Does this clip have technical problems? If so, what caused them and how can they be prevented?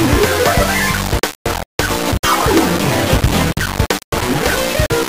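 Yes. Throughout, the sound is coarse and grainy, with harsh distortion that shifts with the sound and noise nearly as loud as the signal. This is likely low bit depth without dither: roughly 3 bits, rounded, so the error tracks the waveform. Prevent it by keeping 16 bits or more and adding dither before any reduction.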